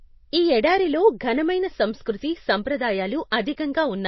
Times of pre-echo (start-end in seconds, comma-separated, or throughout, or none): 3.31